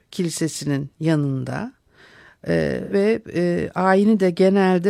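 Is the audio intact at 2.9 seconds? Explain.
No. From 2.83 to 2.94 s the speech briefly smears and turns phasey. This is AAC frame loss with concealment: 85 ms of lost frames were refilled from the last good spectrum.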